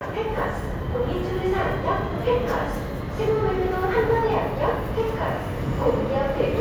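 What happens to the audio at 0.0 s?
Nothing goes wrong at 0.0 s; the audio is intact at that moment.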